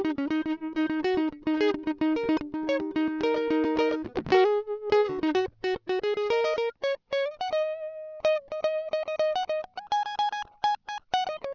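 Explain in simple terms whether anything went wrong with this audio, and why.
Aliasing affects the whole music clip. The quality was reduced without filtering first. Sounds above 6 kHz fold back as gritty, metallic false tones.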